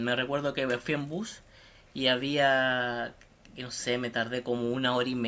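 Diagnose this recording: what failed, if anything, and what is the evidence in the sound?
Nothing failed; no faults present.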